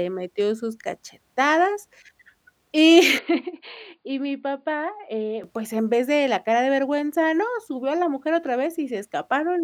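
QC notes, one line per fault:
3.19 to 5.44 s, input switched to a poorer device: capture likely moved to a narrower-band microphone, so everything above 4.8 kHz vanishes and the speech turns dull and boxy, about 5 dB quieter, with a faint new noise floor, starting just before "pues en vez de".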